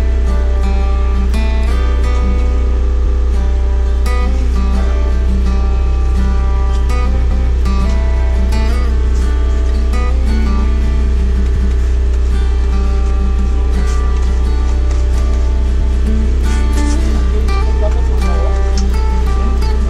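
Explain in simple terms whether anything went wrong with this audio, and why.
Overlapping chunks cause a repeat at 3.06, 7.31, 11.56 and 15.81 seconds. At each of those moments, about a quarter of a second (250 ms) of sound plays twice, which is heard as a brief stutter. The audio was handled in 4-second pieces, and each new piece began a little before the previous one had finished, so the overlapping bit is heard again. That is why the stutters come back at a steady rhythm.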